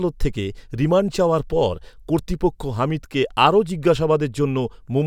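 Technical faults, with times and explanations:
No technical faults detected.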